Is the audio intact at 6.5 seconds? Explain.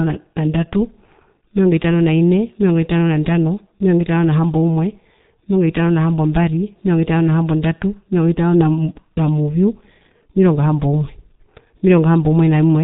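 No. At 6.5 seconds, as across the whole clip, the speech has passed through the G.723.1 codec at a rate consistent with about 6 kbit/s. Its coarse 30 ms frames and slowly updated voice model leave the speech heavily muffled and hoarse, with smeared consonants and nothing above 3.8 kHz.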